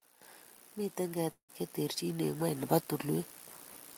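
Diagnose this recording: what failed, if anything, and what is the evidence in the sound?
The network stage most likely suffered a long network dropout. From 1.31 to 1.51 s, the speech breaks off and the receiver fills the gap by extending the last sound as a decaying buzz or hiss, which fades to silence lasting about 110 ms. When the speech resumes, roughly 180 ms of it is simply gone. The lost packets were never recovered, only concealed.

Call processing introduces automatic gain rising. From 1.99 to 3.34 s, the automatic gain control judged the input too quiet and gradually raised its gain by about 4 dB. Because the change is applied to the whole signal, the speech and the background noise swell together over that stretch of more than a second.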